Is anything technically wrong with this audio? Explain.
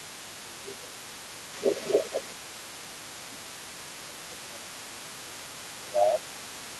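Yes. Two related echo-cancellation problems run through this speech clip.

Speech suppressed in double talk occurs four times: 0.0 to 0.22 s, 0.42 to 1.06 s, 2.33 to 4.86 s, and 5.04 to 6.79 s. The level dips by about 10 to 20 dB, deepest in the long middle stretch. The likely cause is an echo canceller that cannot tell the talker from the far-end playback and attenuates everything. The waveform shows sagging envelopes during those spans.

The other side's voice leaking through is present across the whole clip as a faint second voice, roughly 15 dB below the main talker. This is likely residual loudspeaker echo that the canceller failed to subtract from the microphone signal. It sits in the background. On a spectrogram it appears as a weaker, overlapping harmonic pattern that does not line up with the main speech.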